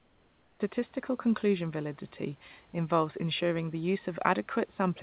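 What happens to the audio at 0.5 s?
At 0.5 s the background is a smooth, featureless hiss, about 5 dB quieter than the room noise that follows, and it has none of the real room's detail. This lasts from the start of the clip to 0.6 s, just before "conclusion validity involves ensuring". It is likely comfort noise in place of the background: the sender stops transmitting during the silence, and the receiver fills the 600 ms gap with synthetic noise shaped only roughly like the room.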